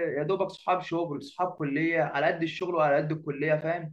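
Four short holes cut into the speech at 0.57, 1.58, 2.60 and 3.61 s, a classic gap between chunks. Each is a 12 ms stretch of silence with hard edges, and they recur once per second, so the audio was joined from 1-second blocks with dead air left at every seam.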